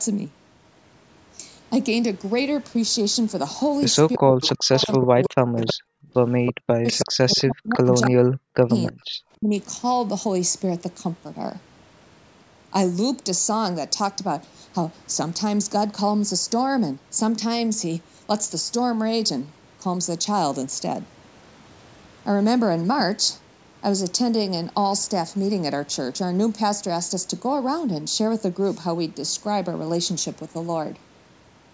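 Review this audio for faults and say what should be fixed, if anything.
A delayed copy of the speech trails it by about 0.32 s, around 10 dB down, at 4.13–5.73, 6.46–7.43 and 8.01–8.07 s, and about 25 dB down at 8.87–8.92 s. This is likely echo leak from a loudspeaker endpoint whose canceller let residual echo through. Fix it with better echo cancellation or a headset at the far end.

The speech dips sharply, by up to roughly 40 dB, in pieces across 4.17–5.87 and 6.61–9.51 s. This is likely speech suppressed in double talk, with the canceller turning down both its own talker and the loudspeaker echo while both sides talked. Improve double-talk detection so the near talker isn't attenuated along with the echo.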